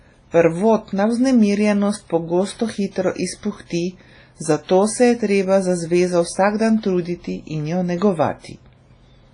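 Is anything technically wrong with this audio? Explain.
Yes. Throughout the speech there is heavy codec damage of the kind left by WMA compression, likely from an early WMA encoder at a low rate, which fits about 24 kbps. Long transform blocks spread quantisation error over tens of milliseconds around each sound, so consonants ring and vowels turn washy, with a hiss that swells and fades with the signal. Weak spectral detail has been discarded, and nothing remains above 10.1 kHz, leaving the top end dull.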